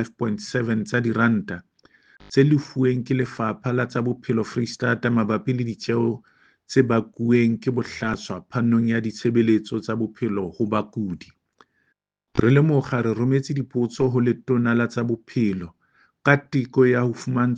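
No technical faults can be heard anywhere in the audio: the signal stays continuous and steady throughout, with no interruptions, level problems or added disturbances.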